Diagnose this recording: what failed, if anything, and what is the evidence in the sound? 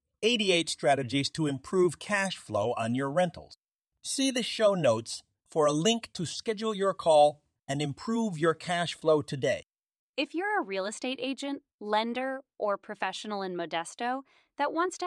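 Nothing in this speech recording stood out as a fault when listening through it.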